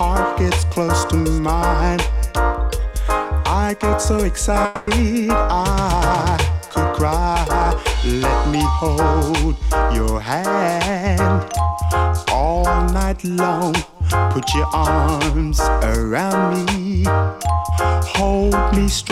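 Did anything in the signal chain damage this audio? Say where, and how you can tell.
Yes: a long network dropout at 4.65 to 4.89 s. For about 0.22 s the last sound is stretched into a fading buzz rather than silence, then the audio resumes with that stretch missing. This likely comes from packets not arriving, with the receiver concealing the gap.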